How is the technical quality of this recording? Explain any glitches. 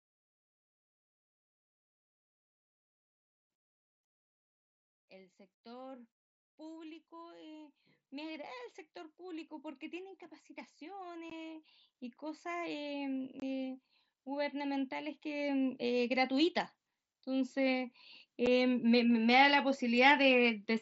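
The recording has two kinds of glitches: repeated automatic gain rises and three brief Bluetooth dropouts, all heard through a wideband mSBC headset link that passes the speech up to 8 kHz with light graininess.

Automatic gain rising occurs from 6.56 to 8.58 s (about 4 dB), 9.16 to 16.55 s (about 15 dB), and 17.24 to 20.1 s (about 6 dB). The gain control judged the input too quiet and kept turning it up, so voice and background noise swell together gradually.

Unconcealed Bluetooth headset packet loss hits at 11.30 s (15 ms), 13.40 to 13.42 s (22.5 ms) and 18.46 s (7.5 ms). Voice packets between headset and phone went missing and nothing filled them, leaving short, abrupt-edged holes in the speech.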